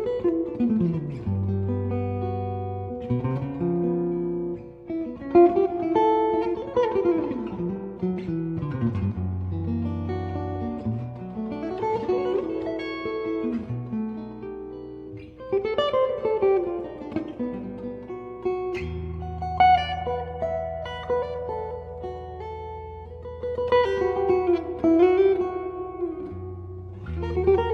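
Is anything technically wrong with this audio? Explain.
Yes. From 4.38 to 16.38 s there's an adaptive stream at a lower bitrate: the player dropped to a cheaper version when the connection slowed. Quality falls suddenly, with no gap, codec artefacts rise, and the treble turns synthetic, which fits a switch from roughly 96 kbit/s AAC to 32 kbit/s HE-AAC.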